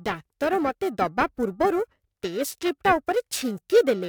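Periodic clock jitter runs through the whole clip. Interference is wobbling the converter's sampling clock at around 1 kHz, so each component of the speech picks up sidebands spaced about that far above and below it, strongest on higher frequencies, giving a rough, metallic edge that disappears in the pauses.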